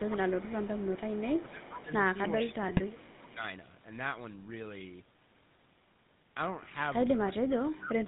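Speech coded with the GSM full-rate codec has a buzzy, gravelly roughness throughout, with nothing above 4 kHz, which fits a 13 kbps stream. The level dips at 0.07–0.31 s, 1.42–2.02 s, 2.35–3.41 s, 7.16–7.53 s and 7.7–8.07 s, by roughly 10 to 30 dB. This is likely speech suppressed in double talk by an echo canceller. Faint delayed copies trailing the sound by 394 ms appear at 0.39–1.82 s, 2.34–2.55 s and 2.92–3.33 s, about 15 to 30 dB down, likely echo leak from a loudspeaker end. Squawks and gargling at 2.68–2.81 s are GSM bit errors, consistent with roughly 1% of bits flipped.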